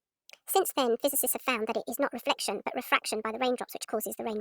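From start to finish the samples are played back faster than they were captured, with no conversion between rates, a wrong sample rate that fits 32 kHz material played at 44.1 kHz. The speech runs 1.38 times too fast and sits about 5.5 semitones high, hurried and chipmunk-like.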